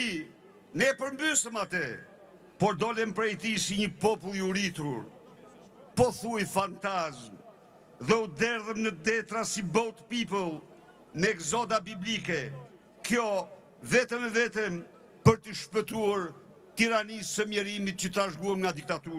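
No technical faults can be heard anywhere in the recording, and the signal stays steady and intact throughout.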